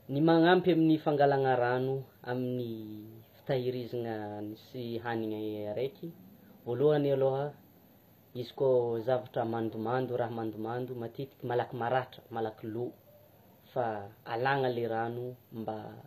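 All the way through this speech the treble sounds rebuilt rather than real: the s sounds come out gritty and a bit metallic, with the top end not quite matching the lower harmonics. That's likely HE-AAC compression, with the upper bands copied up from below and the damage plainly audible, which fits a low bitrate around 24 kbps.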